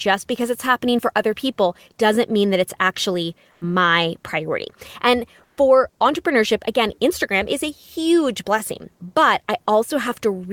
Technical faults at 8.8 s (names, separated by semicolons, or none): none